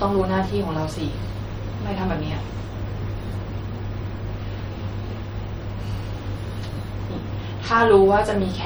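Speech throughout carries audible MP3 compression damage: a watery, swirling quality with metallic chirps on s sounds and smeared consonant attacks. The likely cause is an MP3 encoder running short of bits, which fits a low bitrate of around 48 kbps. It drops weak frequency lines that flicker between frames. On a spectrogram this shows as patchy, blinking holes.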